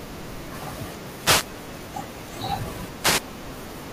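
A short swish of static sweeps over the speech from 1.17 to 1.51 s and again from 3.00 to 3.23 s: wireless microphone noise hits, where the FM radio signal faded and receiver noise surged.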